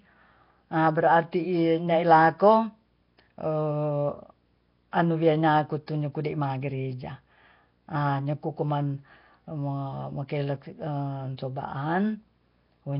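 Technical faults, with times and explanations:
throughout, video or display buzz: a low buzz at about 59.94 Hz with hash above it sits under the speech, plus a faint high whine near 15.7 kHz, all about 40 dB down; a screen or video cable is coupling its field and line scanning rates into the audio path.
throughout, Nellymoser compression: the speech sounds rough and smeared, as if underwater, with a hissy halo and nothing above 5.3 kHz; this is likely heavy Nellymoser Asao coding at a low rate, which gives weak bands no bits and fills them with noise.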